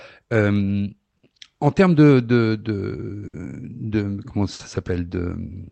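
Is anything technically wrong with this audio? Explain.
Yes. The speech carries clock drift between sender and receiver, with a burst of repeated timing corrections and two short stalls from late packets. All of it is heard through a call codec whose content stops near 8 kHz.

Clock drift between sender and receiver runs through the whole clip. The sender's clock runs roughly 5 percent slow, so the receiver's jitter buffer keeps draining. This leaves a faintly unsteady pace. On a waveform, syllable spacing stretches slightly and unevenly rather than holding a steady rhythm.

Repeated timing corrections occur from 2.42 to 2.98 s. The receiver plays this stretch at 94 percent speed, padding in about 40 ms to refill its buffer. The sound drags slightly. A spectrogram shows harmonics and formant transitions drawn out horizontally, with small seams where the pieces were stretched.

Two short stalls from a late packet follow, at 3.27 to 3.35 s and 4.53 to 4.61 s. 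Each time the buffer ran empty, and the receiver held the last sound for 60 ms until the packet arrived. Playback then resumed from the same place, with nothing lost. Each stall sounds like a brief held tone with a slight buzz. On a spectrogram it shows as flat, unchanging horizontal bands. The waveform shows a repeating periodic block, sometimes slightly lower in level.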